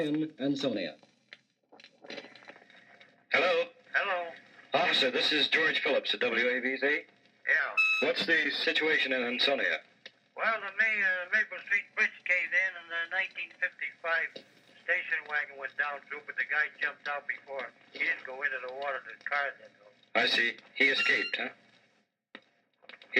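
The audio jumps in speed and pitch three times, then snaps back each time. From 0.76 to 2.51 s it runs 6.26% fast and sits 105 cents sharp, about a semitone. From 7.59 to 8.65 s it runs 6.26% slow and drops 112 cents flat. From 11.71 to 13.72 s it is fast and sharp again by the same amounts. This is likely a drift correction step, where clock-matching software changed the playback rate in one move to balance its buffer.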